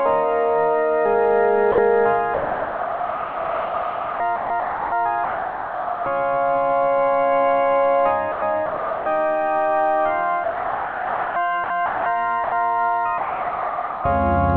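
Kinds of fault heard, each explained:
Sound dropped by the voice detector: at 1.72–1.78, 5.24–6.06, 10.44–11.36, 12.44–12.52 and 13.18–14.04 s the sound gives way to steady synthetic noise for between 60 ms and 0.92 s, then resumes. The sender's detector likely judged the sound to be background and stopped sending, leaving the receiver to fill the gap with comfort noise.
Sound chopped by the voice detector: across 2.34–4.92, 8.32–9.06 and 11.64–12.06 s the sound breaks up repeatedly, with 2.32 s, 0.5 s and 0.26 s replaced in those stretches. This is likely the detector switching sending on and off several times, with comfort noise covering each off moment.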